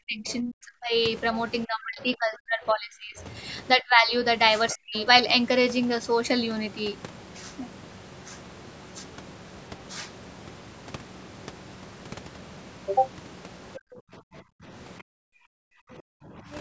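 A speech recording from a call, with content up to about 8 kHz, where the talker keeps getting pushed down whenever the far end talks too. That's speech suppressed in double talk, likely the echo canceller failing to separate the talker from loudspeaker echo and ducking everything. It happens from 0 to 0.94 s, 1.66 to 3.2 s, 3.74 to 4.13 s, 4.73 to 4.94 s and 13.78 to 16.49 s. The talker dips by roughly 35 to 40 dB at worst, the 3.74 s one by only around 20 dB, and the longer stretches are affected for about 1.5 s each. Alongside that there's the other side's voice leaking through, likely loudspeaker pickup the canceller didn't fully remove. It shows up as brief, faint scraps at 0.27 to 0.33 s, 4.7 to 5.03 s and 16.53 to 16.6 s, sitting some 20 to 25 dB under the talker.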